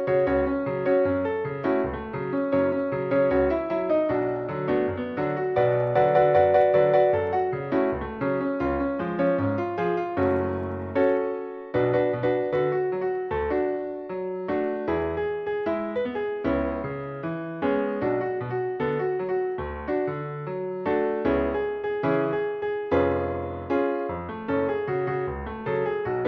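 No technical fault can be heard anywhere in this audio. There is nothing that calls for a timestamp or a cause.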